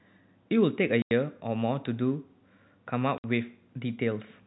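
Packet loss filled with silence at 1.02 to 1.11 s and 3.18 to 3.24 s: the 90 ms and 60 ms holes, consistent with lost 30 ms packets replaced by silence, cut the speech with hard edges, heard through narrowband G.711 telephone coding.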